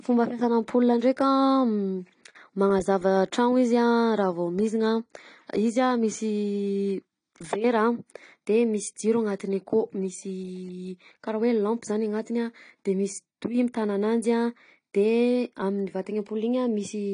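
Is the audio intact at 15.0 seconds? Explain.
No. At 15.0 seconds the speech carries AAC compression damage, as it does for the whole clip. Nothing is present above 10 kHz, so the top end sounds dull. Sibilants turn fizzy and smeared, and held sounds warble. The likely cause is AAC-LC coding at a low rate, with damage at a level that fits about 32 kbps. The encoder drops content it judges least audible, which lowers the cut-off and leaves gaps in the spectrum.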